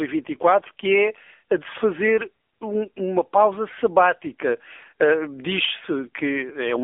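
The speech was squeezed through an AMR narrowband mobile codec for the whole clip, coded at a low bitrate, around 8 kbps to judge by the damage. Everything above 3.6 kHz is gone and the line passes only about 300 Hz to 3.5 kHz, so the voice is thin and boxy. With so few bits for its vocal-tract model and pulse excitation, the codec leaves plainly audible buzzy, synthetic roughness.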